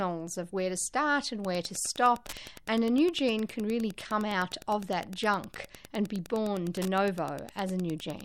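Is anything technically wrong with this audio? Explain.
Yes, there's Wi-Fi interference from 1.35 s, just after "of where to start", to the end. A nearby radio's beacon, every 102.4 ms, gets rectified by the audio circuit, giving a steady tick about ten times a second, roughly 20 dB below the speech.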